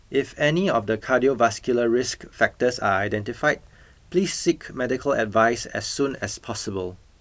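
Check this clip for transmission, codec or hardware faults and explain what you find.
No transmission, codec or hardware faults turn up anywhere in this speech recording.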